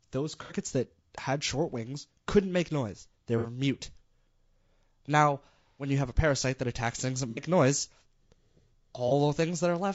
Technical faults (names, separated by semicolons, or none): low-delay AAC compression; AAC frame loss with concealment